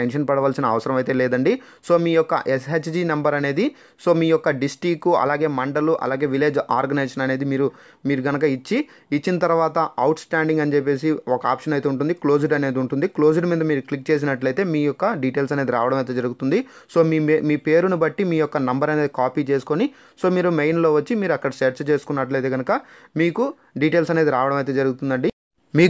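Nothing goes wrong anywhere along the way here; there's simply no technical fault to point to at any moment.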